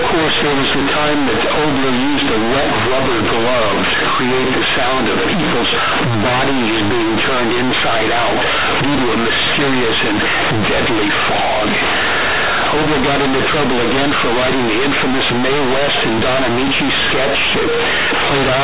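All the way through, companded audio is read as linear. A-law bytes are played as raw 8-bit samples, so the speech blares, buzzy and mangled, with noisy pauses.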